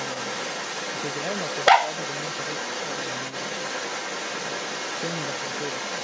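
Other side's voice leaking through runs from 0.0 to 6.04 s: a second voice sits over and around the main talker the whole time, about 5 dB louder than the speech. The likely cause is the talker's device playing the far end on its loudspeaker while the echo canceller fails to strip that sound from the microphone signal. Like the main speech, which tops out near 8 kHz after normal call microphone processing, the leaked voice stays within that band.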